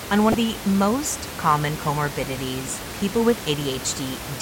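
From 0.31 to 0.34 s, just before "the most common comorbidities", damaged data in the compressed stream makes the decoder lose sync and search for the next frame header. The room noise sits about 11 dB below the speech.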